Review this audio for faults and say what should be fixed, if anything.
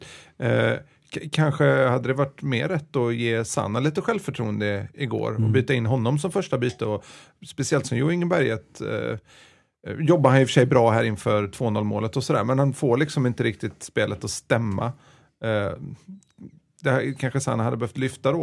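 Nothing stood out on listening, so there is nothing here that needs fixing.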